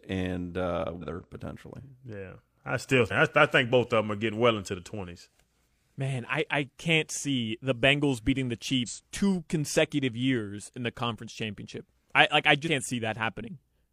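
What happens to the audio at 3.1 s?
Right there, between 3.07 and 3.12 s, you get compressed frames skipped. Just after "I still", the decoder drops what sounds like a couple of whole frames (a jump that fits frames of roughly 46 ms), so about a tenth of a second of speech never plays and it leaps ahead to "I I think both".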